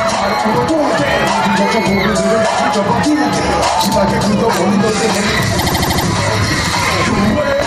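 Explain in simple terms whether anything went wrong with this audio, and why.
Something did go wrong, from 5.58 to 6.05 s. It is a fault called repeated frames. A tiny 78 ms slice of sound plays six extra times, so you hear a quick stutter. That slice fits three compressed frames, and the clip runs 0.47 s longer.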